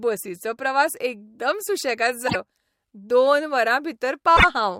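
At 2.27 s and again at 4.36 s, the speech breaks into a garbled stretch of about 90 ms, then jumps ahead. This is likely a broken MP3 bit reservoir. Frames went missing, and the following frames, about 24 ms each, decoded from the wrong data.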